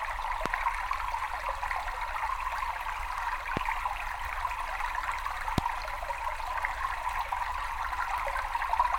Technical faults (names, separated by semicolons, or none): loud pop